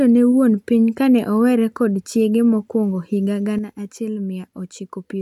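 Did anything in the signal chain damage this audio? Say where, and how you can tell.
Yes. One channel drops out at 3.59 s, right after "kod chiege mokwongo higa", and stays out to the end: the speech falls abruptly by about 6 dB. The likely cause is a stereo channel lost in analogue wiring, halving the mono sum.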